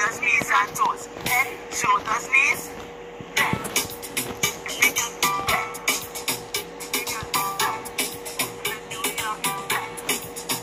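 No technical faults can be heard anywhere in the audio, and the signal stays steady and intact throughout.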